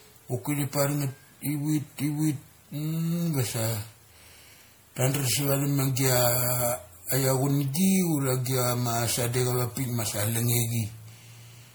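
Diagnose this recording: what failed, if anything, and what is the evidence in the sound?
The codec stage likely failed: the speech appears to have been decoded and re-encoded with MP3 around seven times, at a rate that points to roughly 96 kbit/s, a textbook case of generation loss. Each pass requantises on a shifted frame grid, so the errors stack. Throughout the clip the speech sounds swirly and hollow, consonant attacks are smeared, and the damage exceeds what that bitrate alone would cause, even though content extends up to 20.8 kHz.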